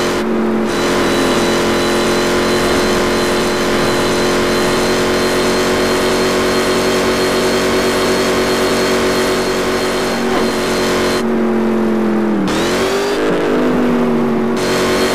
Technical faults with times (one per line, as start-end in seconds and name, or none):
none